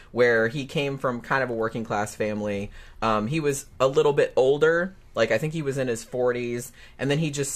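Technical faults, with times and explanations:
5.16 s, overlap between stream segments: there's a tiny skip right here, and that's the join between two 6-second chunks of the stream. Their time stamps claimed a sliver of the same moment, so the player trimmed the duplicate, except the speech wasn't actually doubled. About 6 ms of real audio just vanishes, the waveform jumps straight from one point to a later one, and that discontinuity is what you hear as the skip.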